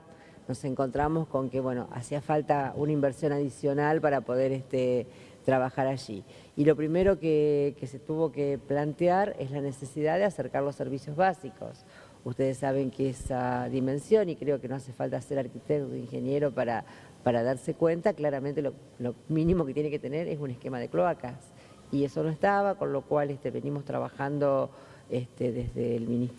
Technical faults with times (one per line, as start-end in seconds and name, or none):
none